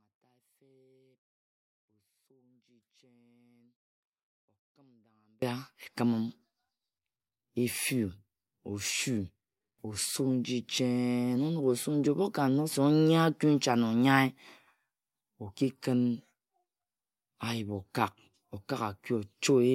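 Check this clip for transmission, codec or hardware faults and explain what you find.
One fault: an audio dropout to a faint residue, already under way at the start and ending at 5.42 s. The feed was likely interrupted while the downstream path stayed live, leaving only faint sound until the speech abruptly returns.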